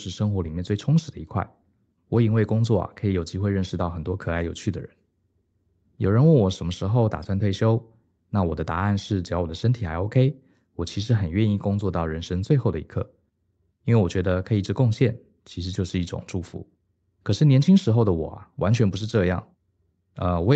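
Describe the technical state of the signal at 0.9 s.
At 0.9 s the speech is intact, with no fault present, only the expected band limit near 8 kHz from the call path.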